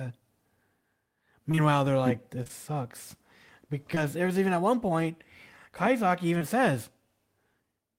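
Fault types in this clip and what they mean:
Short concealed packet loss: six chunks of this speech, each about 20 ms, missed the decoder, and the receiver filled each gap by extending the preceding sound before blending back. Brief smears or wobbles fall at 1.51, 1.55, 2.43, 2.48, 3.95 and 6.38 s, the first pair just before "they're like". A spectrogram shows short stretches of frozen harmonics or smooth noise, and where the sound was voiced the waveform shows a repeated cycle.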